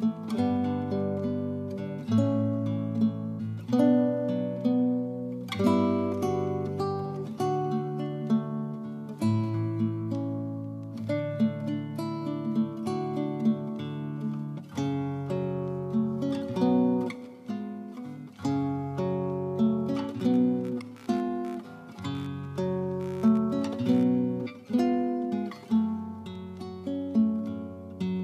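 From 20.19 to 24.19 s, computer activity noise appears. A faint buzz, pulsing roughly 70 times a second, sits about 30 dB below the sound. Processor or graphics load is disturbing the shared ground, so the buzz follows the computer's activity, not the audio.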